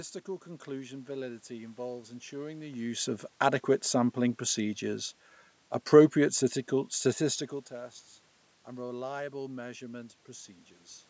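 Nothing in this recording points to a technical fault.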